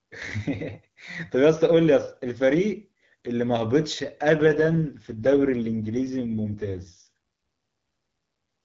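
From 4.38 s to 7.08 s there's an AMR rate drop. The network pushed the AMR wideband codec down to a leaner mode to protect a weak link, which sounds like roughly 6.6 kbit/s instead of 12.65. The speech goes raspy and synthetic, with no gap and no loss of bandwidth.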